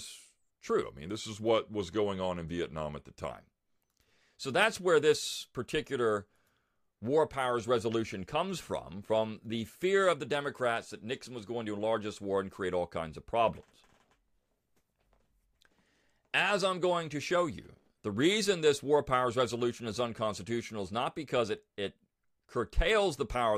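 From 0.82 to 3.31 s, a wrong sample rate, consistent with 48 kHz audio played at 44.1 kHz, slows speech to 0.92 speed, about 1.5 semitones lower.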